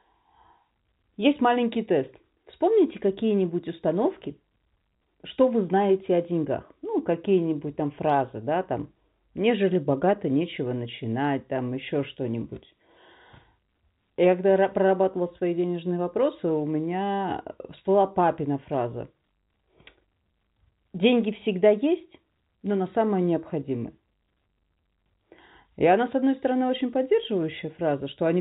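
No technical faults can be heard in this speech.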